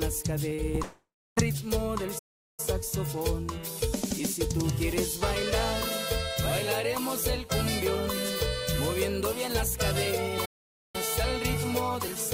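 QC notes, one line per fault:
0.49–0.79 s, repeated packet loss (robotic sound): four short holes, longest 31 ms, patched by repeating prior sound, giving choppy texture; spectrogram shows smeared, duplicated frame stripes.
0.83–1.38 s, long network dropout: the last sound is stretched and fades as a buzz or hiss for about 0.5 s, with the final 0.29 s going quiet. The audio then resumes with a portion missing. A network dropout is the likely cause. The waveform shows a decaying tail, then a flat gap.
2.18–2.60 s and 10.45–10.96 s, playback stall: output cuts off mid-flow for about 0.39 s and 0.49 s, then continues, likely from the player running dry; the waveform shows a flat, abrupt silent block.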